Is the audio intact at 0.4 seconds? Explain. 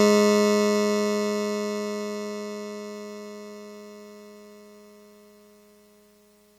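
Yes, the music plays through 0.4 seconds with no dropout, click, distortion or other fault at that moment.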